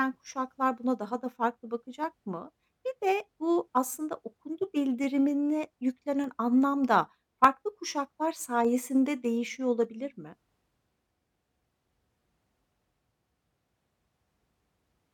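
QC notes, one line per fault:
0.23–14.6 s, clock drift buffer slips: a click recurs every 0.6 s through the speech, about thirty in all. The likely cause is two devices on separate clocks, a few hundred parts per million apart, so the buffer between them periodically drops or repeats a handful of samples.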